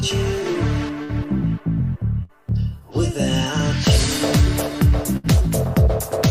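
At 1.03, 2.23 and 5.17 s comes a burst of packet loss, each lasting about 0.09 to 0.1 s. Consecutive packets failed to arrive, so the receiver stretched the last sound for roughly 56, 58 and 67 ms while fading it out, heard as a brief held buzz or dying hiss. Playback then jumps ahead, skipping about 60 ms each time. A spectrogram shows smeared, flattened harmonics decaying, then an abrupt resumption.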